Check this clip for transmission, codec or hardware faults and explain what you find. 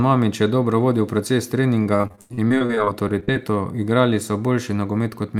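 One transmission fault is present. From 1.83 to 3.37 s, repeated packet loss (robotic sound) occurs. Gaps up to 80 ms keep getting patched by stretching the last sound, leaving choppy speech with pieces missing, unlike a single isolated dropout.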